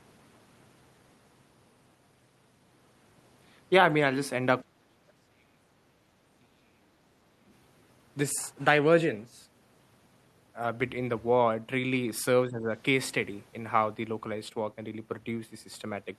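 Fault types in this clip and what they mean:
Speech suppressed in double talk: the speech level collapses from 4.63 to 5.9 s by around 40 dB, again from 6.38 to 6.87 s almost as deeply, and dips by about 10 dB from 12.45 to 12.69 s. The likely cause is an echo canceller turning down the near talker while both sides spoke at once. Unlike packet-loss dropouts, these are dips lasting up to about 1.5 s, not tiny gaps.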